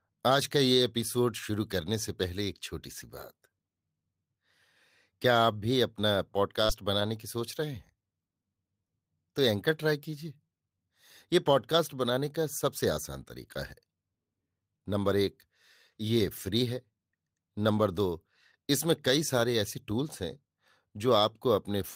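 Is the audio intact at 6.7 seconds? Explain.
No. A short concealed packet loss runs from 6.65 to 6.71 s: about 40 ms never arrived, so the decoder extended the preceding sound and blended back, leaving a brief smear or wobble. Overlapping its end, from 6.69 to 6.71 s, is a lost packet rebuilt from error correction. A 20 ms stretch, consistent with one lost packet, was replayed from a low-bitrate copy carried in the next packet, so it sounds rougher and noisier rather than silent.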